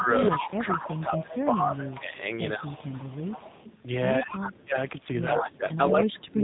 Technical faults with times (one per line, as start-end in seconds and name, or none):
0.00-6.43 AMR narrowband mobile codec
0.00-2.16 speech suppressed in double talk
0.25-1.99 echo leak
2.50-3.82 echo leak
4.19-4.76 speech suppressed in double talk
5.67-5.77 echo leak